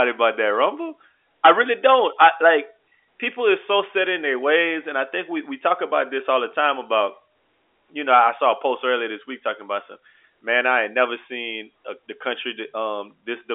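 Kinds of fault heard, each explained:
No faults can be heard: the speech arrives through G.711 A-law telephone coding at 64 kbps, confined to the 300 Hz to 3.5 kHz line band with nothing above 3.8 kHz, and the coding leaves at most faint damage.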